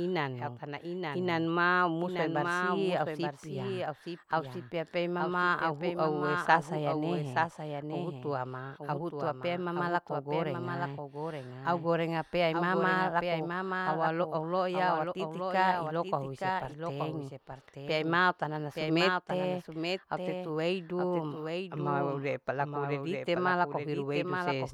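From start to finish the speech is shadowed by a second copy of itself trailing about a second behind and somewhat quieter. It sounds like a clean repeat rather than an echo, with no fading tail and no room colour, so the two lines overlap and blur each other throughout. This is a doubled audio track, likely caused by the same signal reaching the mix twice, once directly and again through a slower path or a misaligned edit.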